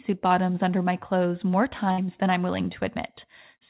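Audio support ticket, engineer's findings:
Burst of packet loss, 1.92 to 2.00 s, between "under my clothes more" and "than I'm willing". Several consecutive packets lost or late at the jitter buffer. Concealment extends the last sound for about 57 ms and fades it. About 60 ms of speech is skipped before playback resumes. Speech band-limited to 4 kHz by the G.711 call codec.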